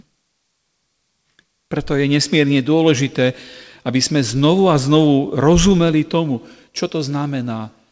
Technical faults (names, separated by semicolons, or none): none